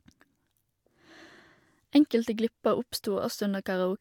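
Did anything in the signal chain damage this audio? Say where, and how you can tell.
No, nothing in the signal chain has damaged this speech recording; the signal holds steady and intact at every stage it has passed through.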